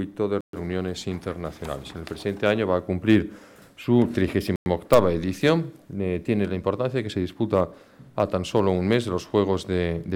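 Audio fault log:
0.41–0.53 s and 4.56–4.66 s, Bluetooth stall: sound drops to silence for about 126 ms, then 102 ms, and resumes where it left off, likely because interference delayed packets and the headphones' buffer ran dry. Waveform shows flat gaps; spectrogram shows blank vertical bands.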